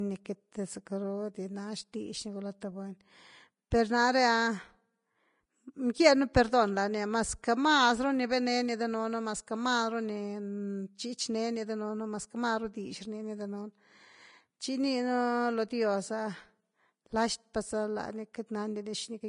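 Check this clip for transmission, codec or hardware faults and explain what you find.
Two faults are present: plainly audible lossy-codec damage across the whole recording and one brief pre-echo.

Vorbis compression, likely the cause, runs throughout. Nothing sounds above 10.5 kHz, and the remaining treble is coarse, hissy and grainy, which points to a low bitrate around 32 kbps. On a spectrogram the energy stops at a flat ceiling, with speckled, blocky texture beneath it.

The pre-echo comes at 3.71 s, just before "per na’re". A sharp onset sat late in a transform block, so quantisation noise meant for it spread about 10 ms earlier. It is heard as a short hiss leading a softened attack. The waveform and spectrogram show a thin noise smear ahead of the transient.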